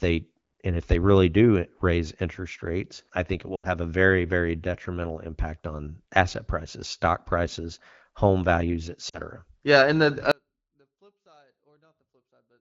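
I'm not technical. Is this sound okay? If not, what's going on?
No. There are lost AMR speech frames at 3.55 to 3.70 s, after "rates I think it", and at 9.09 to 9.19 s, after "stock prices home values". The voice briefly smears and dips. Then an audio dropout to a faint residue starts at 10.3 s and lasts to the end. Only a very faint trace remains, likely because the signal was lost while the line stayed open.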